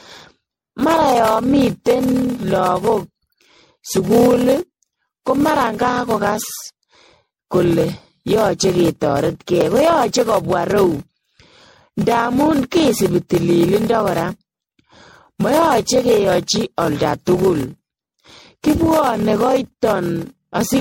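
From the first moment the speech carries a steady buzz at 38.3 Hz from a block size mismatch (padded). Short blocks, which fit 1024 samples, are topped up with zeros before the next stage reads them, so the waveform shows regular silent slivers, and the speech runs at 0.889 times normal speed with its timbre unchanged.

Throughout, the speech also sounds swirly, hollow and smeared, with blurred consonant attacks, the mark of generation loss, likely from around ten rounds of MP3 encoding that points to 64 kbit/s. A spectrogram shows nothing above 16.5 kHz and patchy holes scattered across the bands.

At 0.79 s a chunk of chunks out of order plays two chunks late. Each chunk is about 5.8 ms, so the sound jumbles briefly, and the waveform shows hard discontinuities at the joins. At 9.61 s a chunk arrives one place late, giving a similar brief garble.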